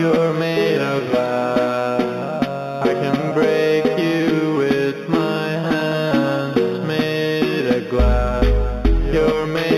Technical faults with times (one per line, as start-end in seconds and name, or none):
0.00-9.77 imaging from linear upsampling